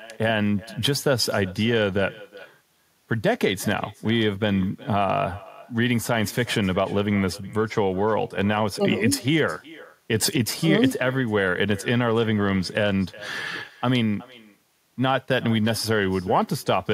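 All the way through there's echo with no canceller: the far end's speaker feeds their mic, so each phrase returns about 21 dB down, thin, roughly 0.4 s later.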